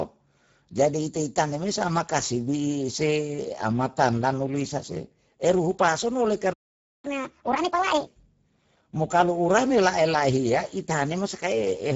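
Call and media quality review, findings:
Speex codec, whole clip: hoarse, noisy speech. Nothing above 7.7 kHz. The degree of damage points to a low-bitrate setting, around 10 kbps. CELP starves the excitation of bits, so the voice turns rough. A plain lowpass or MP3-style codec would sound dull or watery instead, without this hoarseness.

Playback stall, 6.53–7.05 s: the output drops to clean silence for about half a second, straight after "eruhu pason oleh". This is likely a player buffer underrun or a blocked audio thread. A packet-loss dropout would be short, or filled with concealment buzz. Here the gap is dead silent and longer.

Catch-up at higher speed, 7.05–8.07 s: right after the stall, the audio runs 1.5 times faster, with pitch raised by roughly a fifth. The player is draining its backlog by resampling. A time-stretch would keep the pitch steady. Here speed and pitch rise together, which marks resampling.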